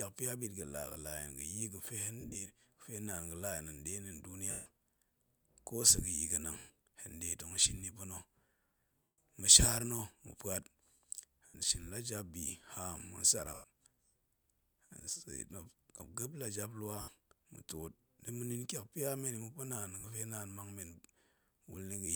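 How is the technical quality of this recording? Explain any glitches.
The recording has repeated dropouts from lost LE Audio frames. They occur at 2.21, 4.51, 6.58, 9.04, 11.48, 13.54, 17.01 and 20.00 s, each lasting 40 to 150 ms. The first is broken into short runs of up to about 30 ms spread over 140 ms. The decoder fills each gap by repeating the last spectrum with random signs, then fading it. The speech briefly turns into a hissy smear that sinks toward silence in the longer gaps.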